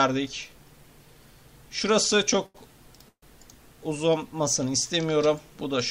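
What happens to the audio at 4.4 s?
At 4.4 s the audio runs on intact, with no dropout, click, distortion or other fault at that moment.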